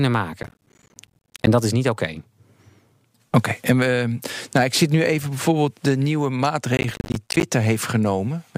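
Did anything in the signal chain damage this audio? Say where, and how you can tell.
Yes, at the driver or buffer stage. Processor overload crackle runs from 0.43 to 1.47 s, before "dat is niet oké", and from 6.77 to 7.43 s, after "even bijvoorbeeld de nieuwe". Many missed deadlines leave hard-edged silent gaps, which fits buffers of about 10 ms.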